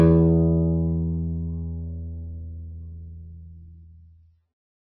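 Music throughout, and the whole clip has plainly audible MP3 compression damage: nothing survives above 5.8 kHz, so it sounds dull and watery, with swirly, flickering detail as weak bands drop in and out. That likely points to a very starved encode, around 16 kbps.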